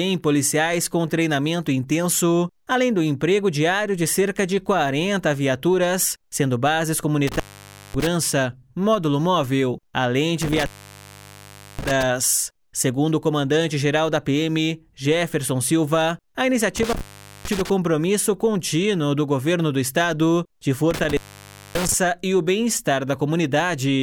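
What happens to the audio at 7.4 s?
An intermittent contact fault runs from 7.27 to 8.07 s. A loose plug or cable briefly loses connection, so the sound drops out for about 0.55 s. Crackle marks the break and the reconnection, with faint hiss left in the gap.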